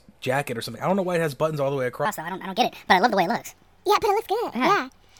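A speech clip that goes wrong at 2.05 s, right after "buttons all the way". From there to the end it's a wrong sample rate problem: everything runs 1.5 times fast and sits about 7 semitones high, which fits 32 kHz audio being played at 48 kHz without conversion.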